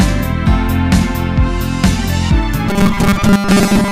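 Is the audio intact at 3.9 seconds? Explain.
No, there's robotic sound from repeated short buffers from 2.69 s to the end, likely a 5 ms chunk looping, giving a stiff 200 Hz buzz over most of that stretch.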